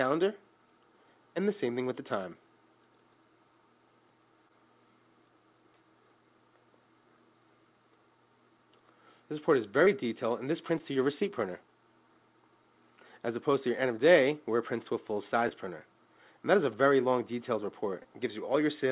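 Short concealed packet loss at 4.48, 9.85, 10.78 to 10.93, 15.49 and 18.03 s: each time about 20 ms of audio, consistent with a lost 20 ms packet, arrived too late and was patched by extending the preceding sound, heard as a brief smear or wobble. The third event also stretches timing slightly. Throughout, the call path's G.711 A-law coding stops everything above 4 kHz.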